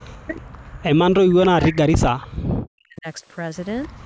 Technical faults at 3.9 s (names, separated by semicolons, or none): echo leak